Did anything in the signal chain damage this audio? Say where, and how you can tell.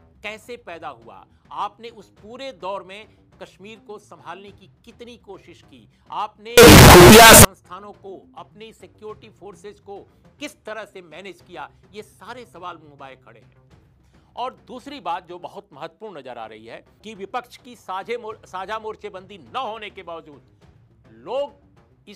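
Yes. From 6.58 to 7.45 s the sound becomes very loud, harsh distortion in which quiet moments are as loud as everything else, which likely points to a sample-format conversion stage mixing up signed and unsigned 16-bit samples. The flipped top bit makes each zero crossing jump across the whole range, unlike ordinary clipping, where only the peaks flatten.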